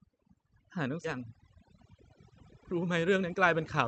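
A speech recording where the background is dropped and broken up into twinkling, warbling specks throughout. That is overdone noise removal: the suppressor was set so hard that it drives individual frequency bands toward zero whenever they come close to its noise estimate, taking the quieter parts of the voice with them. At 1.03 to 1.05 s the audio jumps abruptly forward with no gap, a skip ahead in which roughly 0.7 s of speech is missing. Audio that had already queued up was dropped, likely from a jitter buffer overflow, so the two sides of the jump are joined almost directly.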